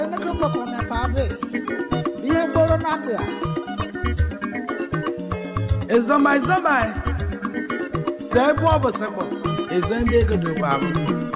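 Nothing technically wrong can be heard in this audio.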